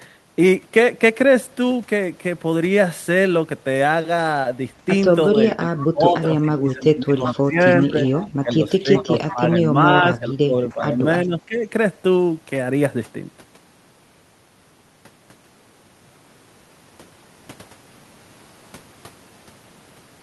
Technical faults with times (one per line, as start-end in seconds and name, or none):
5.30-7.95 speech suppressed in double talk
7.25-7.32 echo leak
8.20-8.28 echo leak
8.43-10.99 speech suppressed in double talk
8.96-9.34 echo leak
11.25-11.65 speech suppressed in double talk